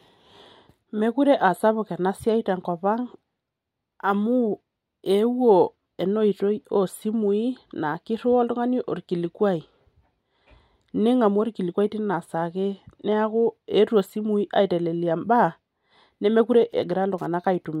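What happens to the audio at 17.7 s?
At 17.7 s the speech carries Wi-Fi interference, running from 16.51 s to the end: a nearby radio's beacon, every 102.4 ms, is rectified by the circuit into steady ticking about ten times a second, well below the speech, unlike mains hum's continuous buzz.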